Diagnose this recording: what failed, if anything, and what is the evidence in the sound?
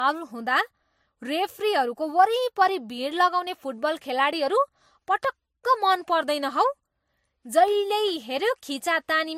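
Codec stage. Throughout, the speech carries two layers of compression artefacts and nothing above 16 kHz. Likely transcoding between lossy codecs, consistent with MP3 re-encoded to Vorbis.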